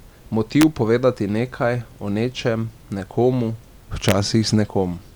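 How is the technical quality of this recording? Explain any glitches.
The recording is marred by integer overflow at two points in the speech. At 0.61 s and again from 4.09 to 4.12 s, loud peaks went past the largest representable integer and wrapped to the opposite sign instead of being limited. The first peak is barely over the limit and the second about 1 dB over, yet each produces a violent crack far sharper than clipping. On a waveform, peaks snap from the top rail to the bottom; a spectrogram shows bright full-height vertical lines.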